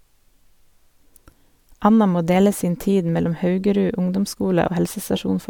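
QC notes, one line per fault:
Nothing stood out on listening to this speech clip.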